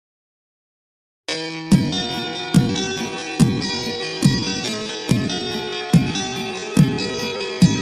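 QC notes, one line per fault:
No faults found.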